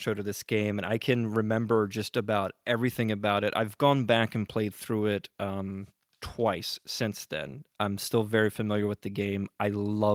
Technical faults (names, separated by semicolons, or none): none